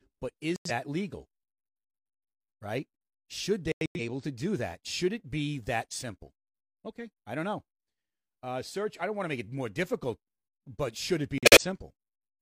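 Abrupt silent holes cut the speech at 0.56 s, 3.72 s (just before "able to do that") and 11.38 s (after "but should it be"). This is corrupt frame muted: the decoder rejected damaged compressed frames and the player substituted silence.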